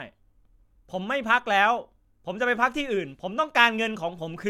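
No dropouts, clicks, distortion or timing glitches turn up anywhere in the recording; nothing to flag.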